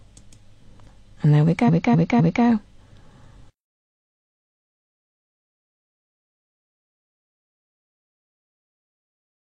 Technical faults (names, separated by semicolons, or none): repeated frames